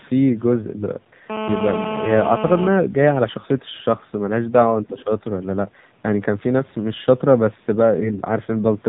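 A speech clip carried through the AMR narrowband mobile codec throughout: nothing above 4 kHz survives, and the voice has the buzzy, synthetic edge of a low-rate mode, which fits roughly 7.4 kbps. This differs from plain band-limiting, which dulls the voice without that artificial, pulse-driven texture. From 1.30 to 2.69 s a GSM phone buzz sits about 6 dB below the speech, a hard, raspy 217 Hz tone with dense harmonics. It holds steady for its whole span, as a nearby handset in a call would, and its pitch has nothing to do with the voice, unlike codec buzz, which follows the speech. Between 4.88 and 5.03 s a faint second voice leaks through well below the main speech, likely the other side's voice leaking through from a loudspeaker that the echo canceller failed to fully remove. Here it is a separate voice rather than a delayed copy of the talker. Over almost the same moment, 4.89 to 5.10 s, the main voice dips by about 10 dB for roughly 200 ms. 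This is likely speech suppressed in double talk: the level drops while the far side plays on the loudspeaker, instead of cutting out cleanly as a dropout would. From 7.96 to 8.21 s AMR bit errors turn the voice hoarse, scratchy and gargly while its pitch and loudness roughly hold. That span fits about a dozen damaged 20 ms frames, and because the sound keeps going, it is distinct from frame loss, which leaves gaps or smeared repeats.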